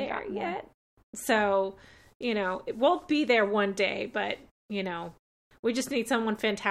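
No technical faults can be heard anywhere in this speech recording.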